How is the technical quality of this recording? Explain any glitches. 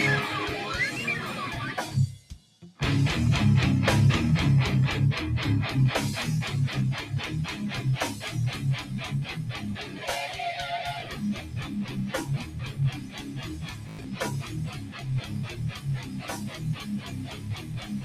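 The recording has clear technical problems: a speech-oriented noise suppressor processes the whole clip, it audibly ducks sustained passages, and there are two Bluetooth dropouts.

Noise suppressor applied to music or sounds: throughout the clip, a suppressor meant for speech treats steady tones, ambience and decays as noise. Level therefore swings by around 15 dB, so the sound pumps and thins. Attacks survive while sustains sink. That pattern of sustains dropping while attacks stay intact separates it from ordinary compression.

Sound cut by the noise suppressor: the suppressor pulls down held or fading material harder than the surrounding sound.
2.15–2.79 s, about 9 dB
9.86–10.01 s, about 6 dB
11.38–11.56 s, about 6 dB
12.44–12.79 s, about 8 dB
12.95–14.16 s, about 7 dB
14.43–15.06 s, about 7 dB
15.22 s to the end, about 9 dB
These are smooth dips and truncated tails, not repeats, so they differ from dropouts.

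Bluetooth stutter: late or missing packets make the receiver replay its last buffer. At 11.00 s, roughly 19 ms repeats once, which fits a single lost packet. From 13.89 to 14.05 s, about 112 ms is lost across 150 ms, with a longest run near 93 ms. That second event buzzes like a machine-gun and suggests several lost packets. The audio then resumes as though it had kept playing. That replaying of sound is what distinguishes it from the suppressor's level drops.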